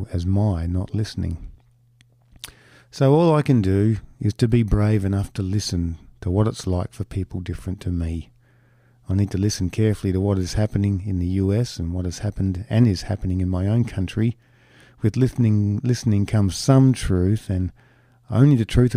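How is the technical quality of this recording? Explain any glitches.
The technical quality of this recording is good, with no glitches to explain.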